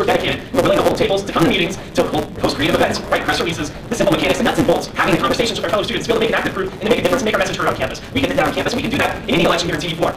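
From start to finish there's a block size mismatch (truncated): a 172 Hz buzz, with the sound rushing along about 1.88 times too fast at roughly normal pitch, which fits 256-sample reads chopping off each block's tail.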